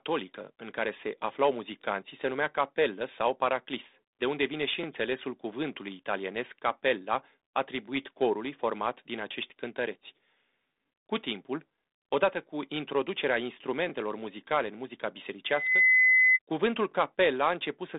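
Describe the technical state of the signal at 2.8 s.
At 2.8 s the audio is intact, with no fault present, and the speech comes through the 32 kbit/s G.726 ADPCM telephone path with its usual narrow band and nothing above about 3.8 kHz.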